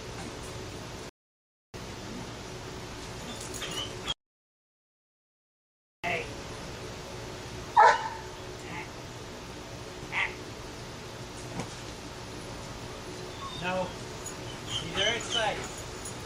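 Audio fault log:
1.09 to 1.74 s, rebuffering stall: the sound halts into silence for about 0.65 s, then picks up at exactly the point where it stopped. Playback ran dry of downloaded audio and waited for more data, so nothing is missing, but the pause stretches the timeline.
4.12 to 6.04 s, audio dropout to silence: the sound cuts out mid-flow into dead digital silence with no room tone, and about 1.9 s of material is gone when it returns. The likely cause is a lost input, with zeros written until the signal came back.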